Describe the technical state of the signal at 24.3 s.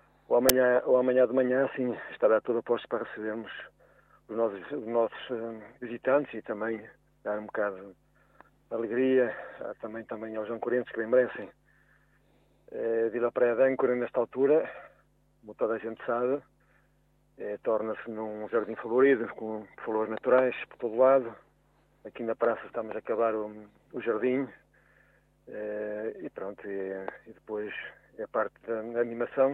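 At 24.3 s the signal is intact, with no audible fault at that moment.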